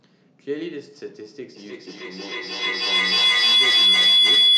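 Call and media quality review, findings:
Feedback howl from 1.56 s to clip end. Two devices sharing one acoustic space, with mic-to-speaker loop gain above unity. Repeats about every 0.3 s build into a tone near 3 kHz, peaking about 17 dB over speech. Spectrogram: bright horizontal line. Waveform: swelling envelope.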